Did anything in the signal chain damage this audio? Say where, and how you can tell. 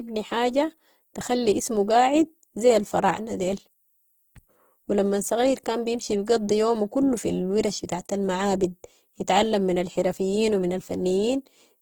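Yes: Opus compression throughout, at the codec stage. The speech sounds rough and grainy yet extends to 20.2 kHz, likely from CELT mode noise-filling bit-starved bands, which fits about 16 kbps.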